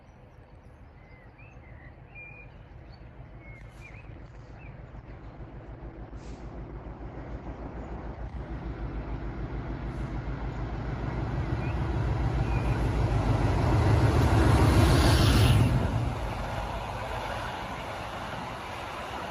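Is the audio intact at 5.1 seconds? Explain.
No. A call bitrate drop covers 5.1 s, running from 3.79 s to 13.27 s. The bandwidth estimate fell and the encoder was starved of bits, which fits a fall from 48 kbps to 12 kbps. It codes more coarsely and narrows the audio band from 20 kHz to 8 kHz. The sound turns rough, watery and muffled, worst for about 4.39 s, before the bitrate recovers.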